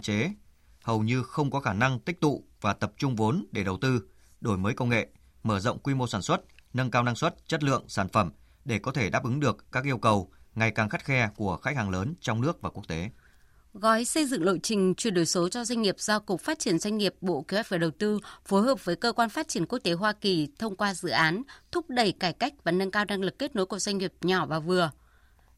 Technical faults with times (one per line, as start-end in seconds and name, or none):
21.16-21.27 hard clipping